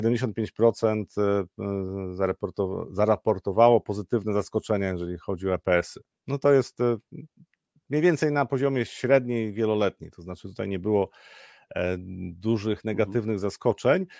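No technical faults are audible anywhere in the speech.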